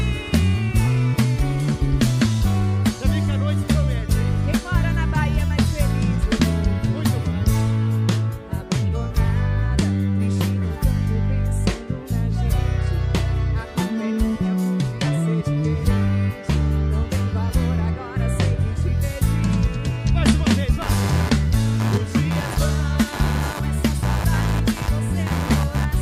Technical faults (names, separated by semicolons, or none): computer activity noise